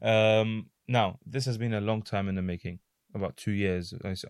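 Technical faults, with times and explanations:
Nothing stood out on listening to this speech recording.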